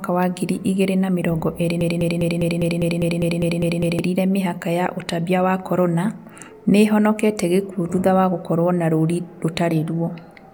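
Speech, with a broken-record loop from 1.81 to 3.99 s: right after "igĩrĩ na mĩrongo ĩrĩ", a 0.2 s fragment repeats 11 times back to back, and the audio for that span is lost before "mĩhaka ya ũtambia wa" resumes. The cause is likely a stalled player or stream re-sending its last buffer.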